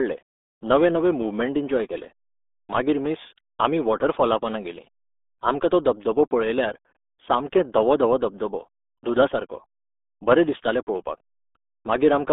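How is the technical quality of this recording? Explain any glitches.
The technical quality is poor. The whole recording has passed through the RealAudio 14.4 codec. This early dial-up speech codec squeezes audio into a very narrow stream, and the heavy damage here fits a budget of about 8 kbit/s. It keeps only roughly 250 Hz to 3.6 kHz and leaves nothing above 3.8 kHz. Throughout the 12 seconds, the speech sounds muffled and boxy, with a gargly, watery roughness where the codec rebuilds the sound crudely.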